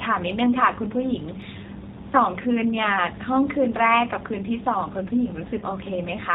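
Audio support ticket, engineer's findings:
G.729 codec throughout: speech is band-limited with nothing above 4 kHz, and plainly rough and synthetic. It fits an 8 kbit/s G.729A leg rebuilding the sound from a filter, a pitch predictor and sparse pulses.

VoIP packet loss concealed by the speech codec at 5.60–5.63 s: a short smear where the decoder stretched the previous frame and faded it. The 20 ms gap fits a single lost packet, with some weakness lingering just after.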